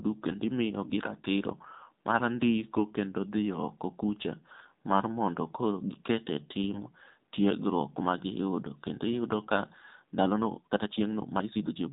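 The whole thing has come through the AMR narrowband mobile codec. Nothing above 4 kHz survives, and the buzzy, synthetic edge on every syllable fits a low mode around 7.4 kbps, where the vocal-tract model gets only a few pulses per subframe to work with.

From 6.74 to 6.83 s, between "mondo koro giket e" and "tiegruok ma giyudo", there's a burst of AMR bit errors. The weakly protected bits in what sounds like about four frames got flipped, roughly 2 percent of them, so the excitation pulses land wrong. Pitch and level hold, but the voice turns hoarse and gargly for that moment.

From 10.15 s to the end, the pace suddenly jumps to about 1.68 times normal while the pitch stays put, and it sounds rushed. That's likely a time-stretched section, where software squeezed the audio to fit a length by dropping short pieces.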